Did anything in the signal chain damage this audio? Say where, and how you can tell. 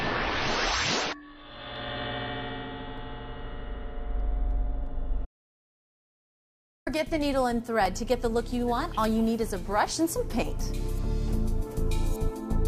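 Yes. Clock drift buffer slips show up at the driver or buffer stage: a regular click recurs every 1.22 s or so, roughly ten of them between 0.54 and 11.52 s. That steady spacing is the giveaway. It's likely two devices on separate clocks, off by something like 300 ppm, so the buffer between them creeps until it drops or repeats a small block, maybe fifteen samples' worth, each time.

There's also an audio dropout to silence from 5.25 to 6.87 s, about 1.6 s where everything goes silent, no room tone at all, then the sound picks up again mid-flow. Whatever was there is simply gone. That points to the input side rather than a codec. It's likely a momentary loss of the device or link while the recorder carried on writing silence.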